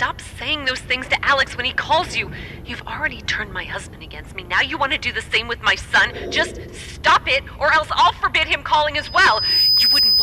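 At 8.98 s a loudspeaker feedback squeal starts at 5 kHz and runs to the end at 10.22 s. The microphone is re-amplifying the speaker's output, and the loop gain exceeds one at that frequency. Unlike a steady interference whistle, it swells over roughly three-quarters of a second to sit a few decibels above the sound.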